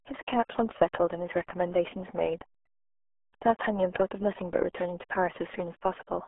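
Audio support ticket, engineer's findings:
RealAudio 14.4 codec, whole clip. Speech muffled and gargly from the start, no spot where it clears up. Band sits roughly 300 Hz to 3.4 kHz, and nothing gets above 3.7 kHz, so sibilance and air are just gone. Heavy codec damage, the sort of smearing you'd expect from the old RealAudio 1 dial-up speech coder squeezing everything into something like 8 kbit/s.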